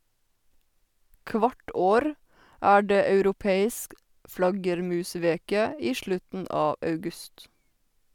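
No audible technical faults appear anywhere in this speech recording.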